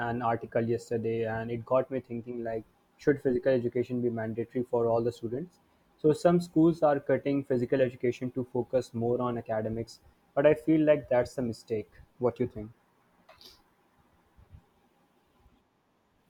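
No technical faults are audible anywhere in the recording.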